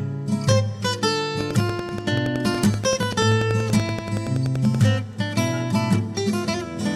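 From 1.41 to 4.76 s there's a regular train of clicks, about ten a second, popping well above the sound, likely interference or a faulty connection.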